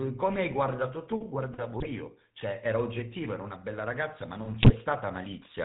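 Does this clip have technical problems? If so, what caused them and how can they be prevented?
Yes, two related problems. The whole clip runs through the GSM full-rate codec, and the damage is plainly audible: a buzzy, gravelly edge on the speech and nothing above about 4 kHz, which fits the old 13 kbps full-rate scheme. It models the vocal tract and excites it with a sparse, regularly spaced pulse train, so the fine texture of the voice is thrown away and replaced by that rough buzz. To prevent it, capture or route the call over a wideband or modern codec instead of legacy full-rate GSM.

There are also GSM bit errors, from 1.80 to 1.91 s and again from 4.62 to 4.73 s. In each burst the speech briefly breaks up into squawky, gargling artefacts. That's the decoder receiving corrupted frame parameters, with bad filter, pitch or gain values bending the spectrum or spiking the level for a few 20 ms frames. 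The sound points to a few percent of bits arriving flipped, typical of a weak radio link. To prevent it, record from a stronger, more reliable connection, or one with better error protection.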